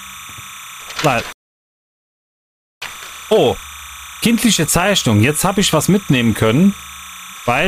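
There's a steady chirping warble sitting behind the audio the whole way through, which is timecode bleed. Linear timecode from an adjacent track or cable is leaking in, flipping between tones around 1 and 2 kHz at roughly 20 dB below the sound, consistent with 29.97 fps code. Then at 1.33 s the audio drops to silence until 2.82 s and picks up exactly where it left off. That's a rebuffering stall: the player ran dry and waited for more data, adding about 1.49 s without losing anything.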